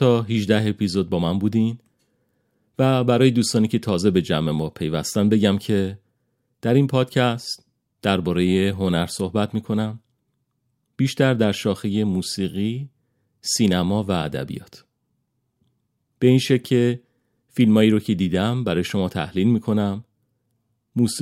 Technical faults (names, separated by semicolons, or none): none